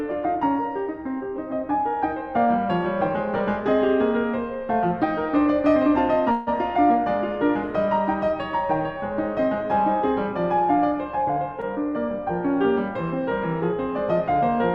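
At 6.31 s the music stops moving and its last sound hangs on as a fading buzz until 6.49 s, a call audio freeze, likely from delayed packets draining the jitter buffer. Unlike a dropout, nothing is lost: about 150 ms is inserted, then playback resumes exactly where it stopped.

From 11.18 to 11.53 s a jitter buffer speed-up runs the music about 8% fast, trimming around 40 ms in many tiny pitch-period cuts. The pitch stays the same, which sets it apart from a resampling error, but the tempo briefly rushes and loses its steadiness.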